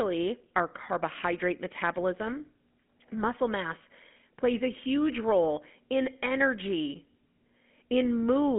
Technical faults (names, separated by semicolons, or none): GSM full-rate codec